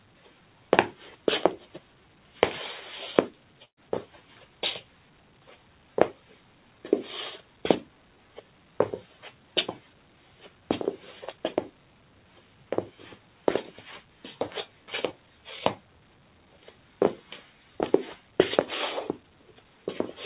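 Right from the start, a noise suppressor built for speech is working on these sounds as if they were noise, swinging the level around by roughly 10 dB. It treats anything steady or ringing as something to push down, so sharp onsets get through while sustained parts and decays keep sinking. The result is a pumping, fluttery quality, and the ambience feels thinned out. All of this sits inside a band that stops at 4 kHz, which points to a narrowband G.711-style call path.

You can hear the suppressor biting harder in several stretches, each time pulling the sound down by about 5 dB: from 0.00 to 0.72 s, from 3.38 to 10.68 s, from 11.72 to 16.99 s, and from 18.23 s to the end. Within those spans, held and fading material gets clipped short or drops away, while sudden hits mostly keep their level.

At 3.65 to 3.80 s, inside that second stretch, there's a burst of packet loss. The receiver covers the gap by stretching out the last bit of sound for a while and fading it. 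Then there's about 100 ms of near silence before the audio picks up again, roughly 120 ms further along. That leaves a short, audible hole with a smeared tail leading into it.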